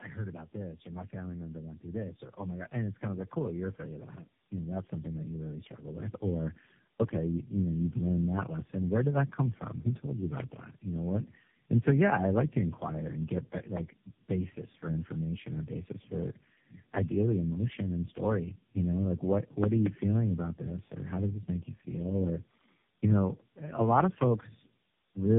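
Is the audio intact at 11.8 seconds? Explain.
No. At 11.8 s the speech is affected by tandem speech coding, which runs through the whole clip. The sound points to about four low-rate speech codecs in a row. Each decode and re-encode works on the last stage's damaged output, so errors pile up. The result is rough, muffled and warbly speech. Nothing is heard above about 3.7 kHz, so the sibilants lose their edge.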